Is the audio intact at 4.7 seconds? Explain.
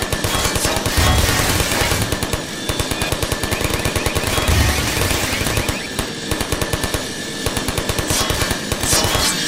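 Yes, at 4.7 seconds the audio is intact, with no dropout, click, distortion or other fault at that moment.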